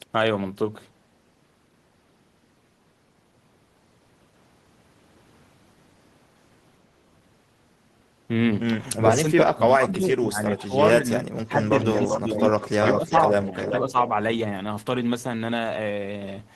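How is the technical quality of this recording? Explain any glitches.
The recording has two glitches that come from echo cancellation on a speakerphone-style call, and they overlap between about 9 and 14 seconds.

From 9.05 to 12.44 s, and again from 12.98 to 13.96 s, the speech is suppressed in double talk. The level dips, by roughly 20 dB at worst in the first stretch and about half that in the second, and it is affected in patches that add up to around two seconds, then under half a second. This is likely the echo canceller hearing both sides at once and turning the near-end talker down along with the echo it was trying to remove.

From 11.8 to 14.09 s there is an echo leak: a copy of the speech returns about 391 ms late, only a few decibels below the direct sound. Its likely cause is a loudspeaker at one end whose echo canceller failed to subtract everything the microphone caught, sending the residue back down the line.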